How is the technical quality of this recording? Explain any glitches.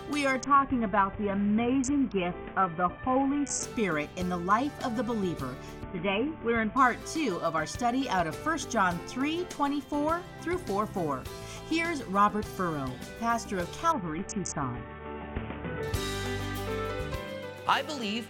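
The quality is compromised by a Bluetooth SBC bit pool drop, at 0.41–3.63 s, 5.83–6.77 s and 13.92–15.83 s. The link starved the encoder, which points to a bit pool falling from 31 to 5, near 50 kbps. That dulls the treble and adds grit without the audio cutting out, unlike packet loss.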